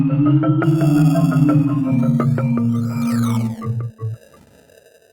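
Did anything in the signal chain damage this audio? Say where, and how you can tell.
No, nothing stood out on listening that would point to damage at any stage of the signal chain.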